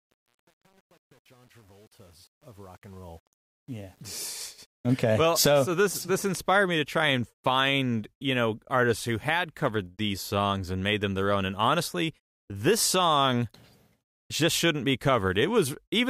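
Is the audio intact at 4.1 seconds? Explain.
No, truncation distortion on the fade runs from 0.0 to 5.04 s: the fade-in keeps only 8 bits without dither, so at 4.1 s the speech is gritty.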